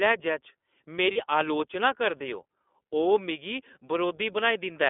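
iLBC codec, throughout: each frame's excitation is coded independently and the line passes only 250 Hz to 3.5 kHz, so the speech sounds plainly rough, synthetic and muffled, consistent with the 20 ms, 15.2 kbps mode.

Lost iLBC frames, 1.12 to 1.17 s: a 40 ms dropout, which fits two missing 20 ms frames, is concealed by repeating the last pitch cycle with noise, giving a brief buzzy held vowel before "अलोचना करदे ओ" resumes cleanly.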